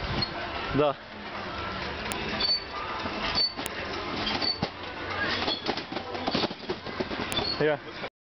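At 2.12 s, a sharp, loud click cuts through the sound. Another snaps at 3.66 s, and a third at 7.32 s. Each lasts only a moment. This is a file header played as audio. The clip was built from separate WAV pieces joined end to end, and each piece kept its header. Those few dozen bytes of file data play as samples. Each click marks where a new piece begins, regardless of the surrounding sound.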